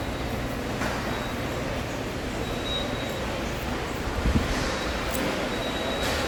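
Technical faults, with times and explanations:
Throughout: generation loss. The sound is swirly, hollow and smeared, with blurred attacks. Likely about five lossy re-encodes, fitting 64 kbit/s Opus, each stacking fresh quantisation noise.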